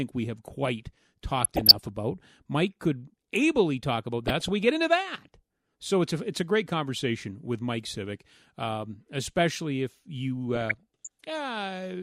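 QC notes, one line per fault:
1.4–1.87 s (after "we have quite"), 4.24–4.69 s (after "could ably talk about", before "into that"), 10.55–11.31 s (after "um especially if you"): DAB burbling. Bit errors on the order of a few tenths of a percent slip past error correction, so wrong samples put short blips of noise in single sub-bands. On a spectrogram these show as blocky, flickering horizontal bands, and the waveform has uneven bursts.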